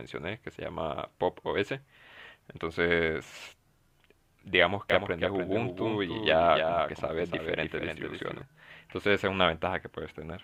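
A second capture path or an out-of-step edit likely mixed the audio in twice from 4.90 s to 8.42 s, producing a doubled audio track. A dry, full-band copy trails about a third of a second behind, roughly 5 dB quieter, and switches on and off abruptly.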